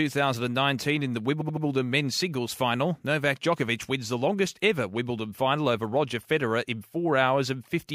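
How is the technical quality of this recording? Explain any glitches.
There's one clear glitch, a case of repeated frames. Between 1.4 and 1.64 s, right after "in the" and before "men's singles final", a chunk of about 78 ms plays three extra times, which fits a few compressed frames being sent again. It comes across as a quick stutter and stretches the speech by about 235 ms.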